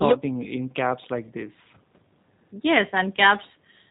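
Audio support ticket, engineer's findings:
Speech sounds band-limited, rough and slightly synthetic for the whole clip. Cause: G.729 codec at 8 kbit/s. Frames are rebuilt from a vocal tract filter, pitch predictor and sparse pulses, and nothing passes above 4 kHz.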